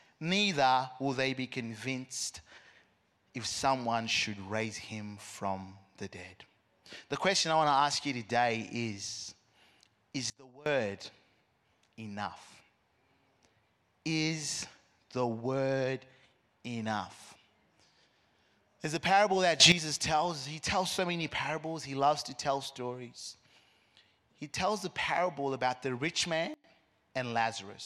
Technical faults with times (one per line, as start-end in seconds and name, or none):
10.30-10.66 sudden gain jump
19.60-19.72 sudden gain jump
26.54-26.64 sudden gain jump